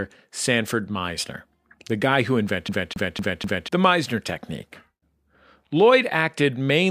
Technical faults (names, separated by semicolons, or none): CD stuck on one turn